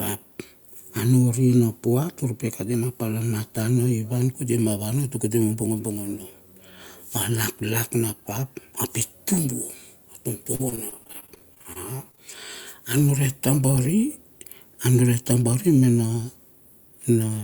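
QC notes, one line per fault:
10.55–12.19 s, repeated packet loss (robotic sound): packets kept arriving lost or late, leaving 18 gaps of up to 36 ms. About 370 ms was filled by extending the previous sound and 240 ms is simply missing, so the speech turns choppy.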